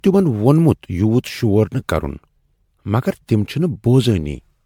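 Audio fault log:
throughout, generation loss: swirly, hollow speech with smeared attacks, worse than one MP3 pass near 100 kbit/s explains, likely from about seven repeated re-encodes.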